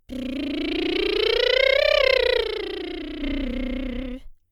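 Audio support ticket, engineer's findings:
One channel drops out, 2.42–3.22 s. Music level falls abruptly by about 6 dB. Likely a lost stereo channel upstream of mono fold-down; only the remaining channel survives the sum.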